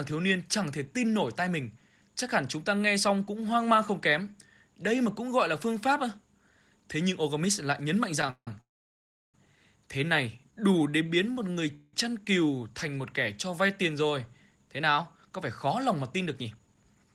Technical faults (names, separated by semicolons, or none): call audio freeze; jitter buffer slow-down; jitter buffer speed-up